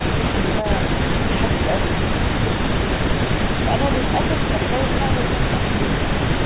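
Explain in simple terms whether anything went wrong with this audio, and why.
Nothing went wrong here.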